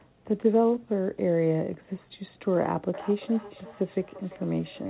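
From 2.94 s to the end there's feedback echo between two devices: a second device's speaker leaks into a nearby mic, so the speech returns about every third of a second at about 18 dB down, thin and ringing.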